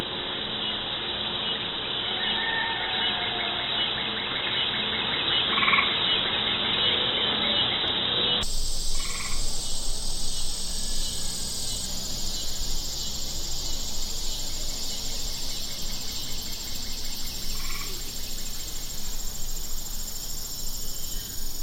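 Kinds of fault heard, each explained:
Input switched to a poorer device, 0.0 to 8.43 s: nothing reaches above 3.9 kHz, so the sound is dull and boxy, then opens out abruptly with no gap. This is likely a narrower-band input in use before the change, with little added noise and no clear level step.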